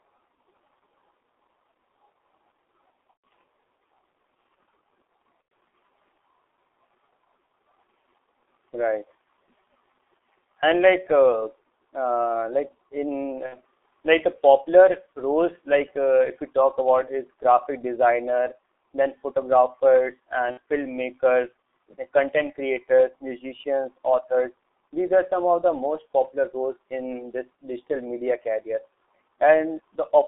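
The recording is telephone speech coded with G.723.1 for its full length. The sound fits this low-rate codec at around 6.3 kbit/s. The band is cut to roughly 300 Hz to 3.6 kHz, so everything above is gone. The codec damage is heavy. Speech sounds muffled and hoarse. Consonants smear together, because the codec refreshes its model of the voice only every 30 ms. Four dropouts are caused by VoIP packet loss concealed by the speech codec. They fall at 3.11 s, 5.42 to 5.51 s, 13.46 to 13.57 s and 20.51 to 20.58 s. At each one the decoder repeats its last pitch and filter with falling gain. The result is a buzzy tone or coloured noise that fades. The first gap hides about 120 ms of audio, which points to four lost 30 ms frames. The others hide about 90 ms and 60 ms. Because each frame builds on the one before, the speech stays weak or distorted for tens of milliseconds or more after each gap.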